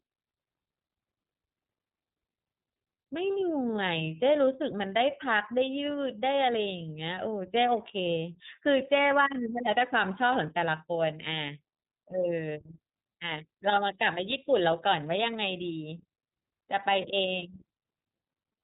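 Throughout the speech, the signal has passed through the iLBC codec, which codes each 30 ms frame on its own. That frame length points to the 13.33 kbps mode. Nothing above 3.8 kHz survives, so the speech sounds muffled and narrowband, with a plainly audible rough, synthetic edge.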